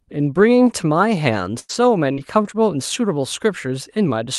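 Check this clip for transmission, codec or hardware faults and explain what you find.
There's a run of repeated packet loss (robotic sound) from about 1.27 to 2.56 s. Four short dropouts land in that stretch, the longest 95 ms, with around 180 ms of audio missing in total. Each hole gets papered over by stretching the last bit of sound forward, roughly a tenth of a second rebuilt overall, so the speech turns choppy there. The call codec underneath sounds like Opus, with the top end rolling off around 12 kHz.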